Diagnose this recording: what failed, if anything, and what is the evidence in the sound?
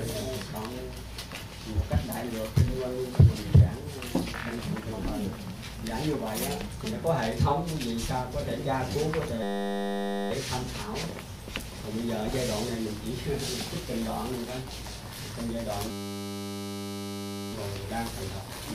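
A system hang loop at the driver or buffer stage: from 9.43 to 10.31 s and 15.91 to 17.53 s the sound becomes a steady 100 Hz buzz, one 10 ms slice repeating, which fits a 10 ms ring buffer. Unlike mains hum, it is abrupt and lasts only while frozen.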